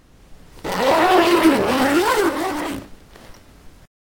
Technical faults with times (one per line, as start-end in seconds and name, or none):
0.00-4.13 imaging from sample-and-hold upsampling